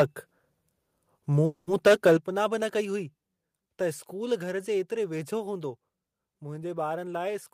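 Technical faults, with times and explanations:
1.45–1.69 s, call audio freeze: For about 220 ms the last sound is stretched into a buzzy tone that fades without dropping to silence. Then the audio resumes exactly where it stopped, with nothing lost. The likely cause is packets held up in transit, which left the jitter buffer empty. The receiver filled the wait by extending what it already had, so the rest of the audio now runs about 220 ms later than before.
1.86–2.13 s, microphone overload: The loudest stretch here has a harsh, crackly edge, as if its peaks were being flattened. The likely cause is microphone input set too high, driving the signal about 8 dB past the converter's limit. Roughly 15 percent of the samples in this stretch hit that ceiling and had their tops cut off. That squaring-off adds the gritty distortion heard on the peaks.
2.17 s, microphone volume stepped down: Just after the distorted passage, the sound and its background both drop suddenly in level, by about 9 dB, in a single step rather than a fade. 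The likely cause is the call software noticing the clipping at the microphone and cutting the device's input volume at once to stop it. Everything after this point sits noticeably quieter than the overloaded section before it.
6.97–7.51 s, jitter buffer speed-up: Near the end, the audio becomes slightly hurried, running at about 106 percent of normal speed while the pitch stays put. The receiver's jitter buffer was holding more audio than its target. To cut that delay it removed short pieces one or a few pitch periods long, many times in a row. About 40 ms were taken out in total, which tightens the timing without any change in pitch.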